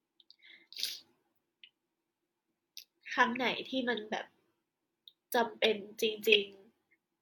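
No technical faults turn up anywhere in the clip, so there is nothing to describe in time order.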